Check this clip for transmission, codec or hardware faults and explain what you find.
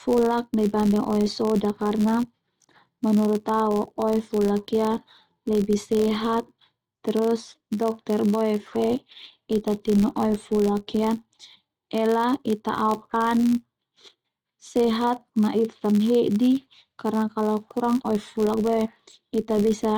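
Three faults run through this speech clip: a block-rate buzz from a filter that resets, a clock mismatch between the two ends, and the stream of small timing corrections that the mismatch forces.

Filter restarted on every block: Across the whole clip, a filter loses its memory at each block boundary and restarts from silence, leaving a small transient every time. The ticks repeat at 86.1 Hz, which fits a 512-sample block, giving a buzz that gets louder and quieter with the speech. A spectrogram shows a harmonic comb at multiples of 86.1 Hz, and the waveform shows evenly spaced spikes.

Clock drift between sender and receiver: For the full length, the sender's audio clock runs roughly 5 percent faster than the receiver's. Audio arrives a little faster than it can be played, so the jitter buffer keeps filling up. The receiver has to keep throwing material away to keep its delay in check, which heard as a pacing that never quite settles.

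Repeated timing corrections: From 0.09 s to 19.92 s, the receiver keeps cutting short pieces to keep up with a sender running at 105 percent speed. Every edit goes the same way, but they are unevenly spaced. They come through as slight hiccups and an unsteady tempo. In a waveform or spectrogram they show as small discontinuities and slightly shortened stretches, scattered irregularly.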